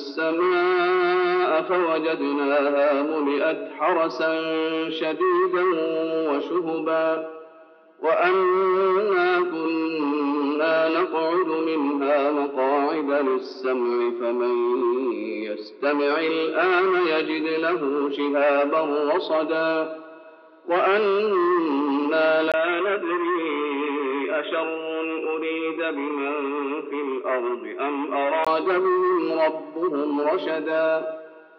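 From 22.52 s to 28.47 s the audio abruptly turns dull and boxy, with nothing above 3.8 kHz, a level drop of around 5 dB and a faint new noise floor roughly 45 dB down. A 20 ms silence marks the change. The likely cause is an input switched to a poorer device. Unlike a simple low-pass filter or codec bandwidth cut, this one brings its own tone, level and background noise, all arriving together after that brief gap.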